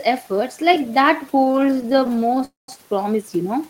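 Packets arriving late kept draining the jitter buffer between 1.32 and 2.43 s, so dozens of brief repeated stalls (stutter), none longer than about 19 ms, make the speech drag and stutter. At 2.45 s, the jitter buffer likely ran dry again, producing a call audio freeze: about 0.23 s of fading continuation, mostly silent, before the speech resumes where it stopped at 2.69 s.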